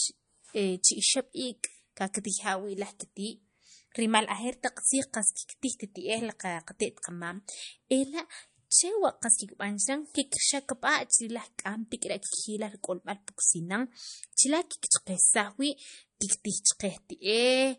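A speech recording that has most likely been squeezed through MP3 compression at a low bitrate, something like 40 kbps, for its full length. Short of bits, the encoder has cut off all content above 10.6 kHz and keeps dropping weak frequency lines, letting them flicker in and out between frames. The damage is plainly audible: the voice loses its airy top, carries a watery, swirling texture, and its s sounds and consonant onsets come out smeared and metallic.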